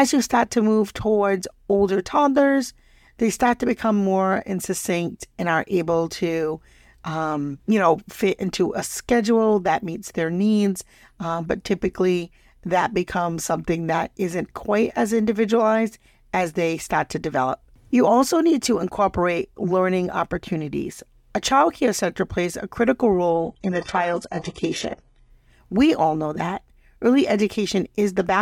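An adaptive stream at a lower bitrate runs from 23.30 to 25.30 s in this speech recording, right after "center plays a critical". The connection slowed, so playback switched abruptly, with no gap, to a much leaner encoding. Treble vanishes above 11.5 kHz, which fits a fall from 96 kbit/s AAC-LC to 12 kbit/s HE-AAC.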